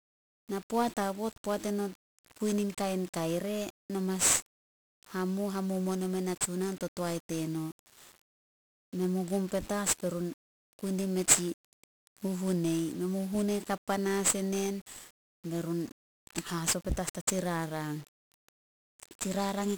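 From start to finish, the speech has been through 1-bit DFPWM compression, a scheme that keeps only a single bit per sample and uses it to nudge an adaptive level up or down. The heavy damage fits a rate of around 48 kbps. Such coarse coding leaves loud broadband quantisation noise riding on every syllable, so the voice comes across fuzzy and crackling, with its upper frequencies drowned under a constant hiss.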